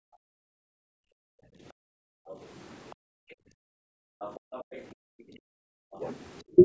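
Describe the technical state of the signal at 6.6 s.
Around 6.6 s the signal is coming out of two overlapping echo-canceller faults. Both close just before that point.

The first is speech suppressed in double talk, from 6.01 to 6.57 s. The likely cause is that both ends of the call were talking at once. The echo canceller could not separate the near talker from the loudspeaker's echo, so it pulled everything down together. The voice dips by around 10 dB in brief patches adding up to something like 70 ms, sounding momentarily pushed back.

The second is background gated by the echo canceller, from 6.43 to 6.56 s. While the far end was playing through the loudspeaker, the canceller clamped the microphone hard, attenuating it by about 29 dB. The room tone drops sharply for that short stretch and springs back once the canceller releases. Through both, the call microphone processing caps the band at 8 kHz.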